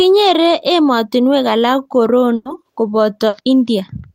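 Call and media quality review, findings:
Held sound then jump ahead, 2.35–2.47 s: burst of packet loss, receiver concealment extended last sound about 100 ms while fading, 100 ms of speech skipped.

Brief smear at 3.29–3.35 s: short concealed packet loss, decoder filled about 40 ms from preceding audio, then blended back into real signal.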